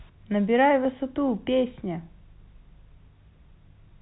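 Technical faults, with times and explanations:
No technical faults can be heard in this speech. It comes through G.711 telephone coding working as it should, with nothing above about 3.9 kHz.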